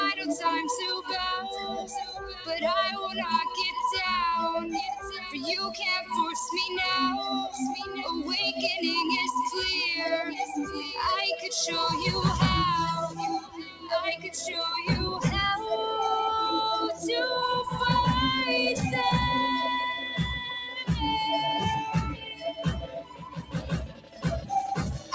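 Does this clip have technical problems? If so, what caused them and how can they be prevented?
Yes. A speech noise suppressor was applied to music or sounds throughout. It treats steady, held sound as noise, so the level swings by around 10 dB and the sound pumps, flutters or thins out.

There is sound cut by the noise suppressor at 1.57–1.86, 2.04–2.49, 7.84–7.99, 13.4–13.92, 14.16–14.34, 19.94–20.89, 22.1–24.51 and 24.94–25.13 s. Sustained parts sink, by as much as about 17 dB. The longest cut is around 22.1–24.51 s.

To prevent both, turn off noise suppression, or use a music mode, when sending anything other than speech.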